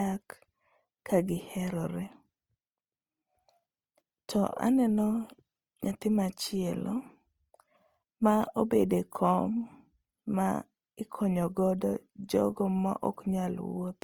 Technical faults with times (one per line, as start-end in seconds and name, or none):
0.00-14.04 Opus compression